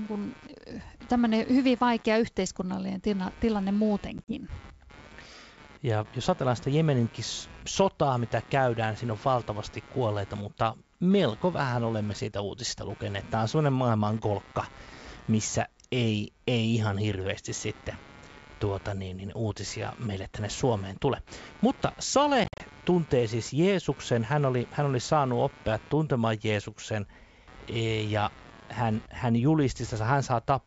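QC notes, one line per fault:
Throughout, computer activity noise: a buzzing, scratchy layer pulsing at roughly 150 times per second, about 25 dB below the speech, that rises and falls with the computer's own activity, not with the talker. Processor, graphics or mouse load is disturbing the audio circuit's shared ground.
4.18–4.32 s and 22.44–22.62 s, packet loss on an ADPCM call: hard-edged holes break up the speech, 50 ms lost over 100 ms (longest gap 40 ms), then 120 ms over 160 ms (longest 50 ms). After each hole the decoder's predictor and step size disagree with the sender's, so speech returns briefly distorted before settling.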